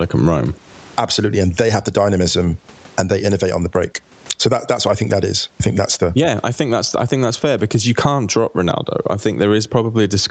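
Right through the speech there's gain pumping. Each time the talker gets loud the level drops, a swing of around 20 dB. The likely cause is gain set far too hot at the mic, with a fast limiter slamming it down on every peak, so loud and quiet parts get squashed together. The top end stops near 8 kHz, as the call path allows.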